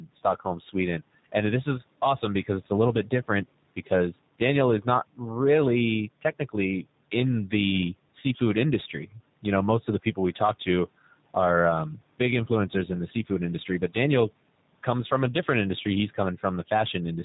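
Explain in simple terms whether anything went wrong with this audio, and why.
Something did go wrong, and it lasts the whole clip: the speech has passed through the G.729 codec, a phone-call compression method that rebuilds the voice from a rough model of the throat and a few pulses per tiny time slice. That is why it sounds slightly rough and synthetic, and why everything above 4 kHz is missing, leaving it muffled. A plain bandwidth limit would sound dull but smooth; this roughness is constant, without the gaps or stutters of lost packets.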